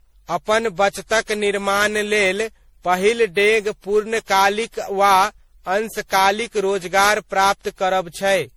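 Throughout, the speech sounds swirly, smeared and hollow, with blurred attacks. This is generation loss, likely from around ten MP3 passes at roughly 64 kbit/s.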